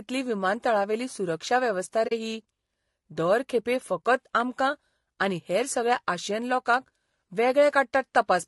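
From the start, the speech has a rough, grainy texture, with noise filling the gaps between harmonics and a thin, artificial-sounding top band. This is low-delay AAC compression, likely AAC-ELD, whose short frames resolve pitch poorly; the plainly audible damage points to a bitrate around 32 kbps.

At 2.07 s, right after "विमानतळावेली सुरक्षा वेवस्था", there is AAC frame loss with muting. The sound fades into a soft-edged gap of about 40 ms, ending at 2.12 s, which fits two lost frames whose spectrum the decoder zeroed.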